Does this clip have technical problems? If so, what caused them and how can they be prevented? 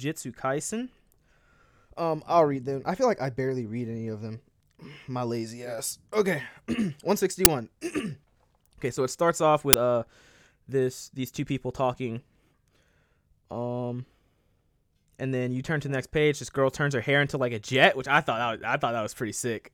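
Yes. The speech is broken twice by a sudden, loud crack, once at 7.45 s and again at 9.73 s, each lasting only about 10 ms. These are uninitialised buffer faults. A 10 ms block of output was sent to playback before any audio had been written into it, so whatever stale values remained in that memory were played as samples. Those values have no relation to the speech, so each burst is loud and noise-like. To prevent this, clear every buffer to silence when it is allocated, and never hand a block to playback until it has been filled.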